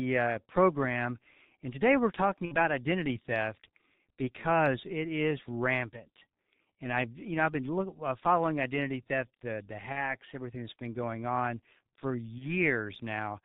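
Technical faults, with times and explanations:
throughout: G.723.1 codec. Heavy low-rate coding strips everything above 4 kHz and tracks the vocal tract only in coarse 30 ms steps, so the speech is muffled and hoarse with smeared consonants, consistent with a bitrate near 6.3 kbit/s.
2.45–2.56 s, 9.92–10.14 s, 12.38–12.46 s: VoIP packet loss concealed by the speech codec. After "and today we're talking", "identity theft the the" and "been going on for", the decoder fills the gaps (about 60 ms, then 30 ms twice, fitting two and one lost frames) by repeating its last pitch and filter at falling gain. This produces a brief buzzy or noisy, fading smear, and the voice stays weak or distorted until the decoder recovers.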